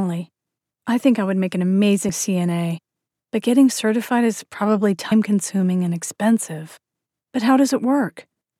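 Compressed frames skipped at 2.08 s and 5.11 s: the audio jumps ahead about 70 ms, then about 100 ms, consistent with three and four missing 26.1 ms frames, leaving smeared blips.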